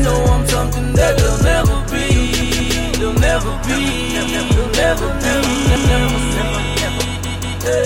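At 2.42 s the same chunk of about 186 ms plays two extra times, and it happens again at 4.27 s (one extra play), 5.76 s (one) and 7.25 s (two more). That's a repeated buffer: fresh audio didn't arrive in time, so the device replayed the last block, which fits an 8192-sample buffer. Each repeat has a hard join, so you get a short stutter. Nothing seems to be lost; playback just stalls and then resumes.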